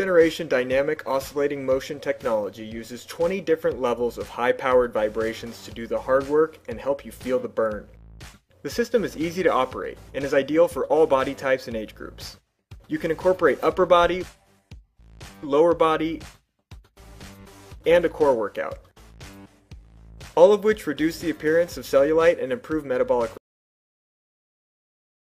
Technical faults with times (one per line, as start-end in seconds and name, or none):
23.37-25.27 cut-off end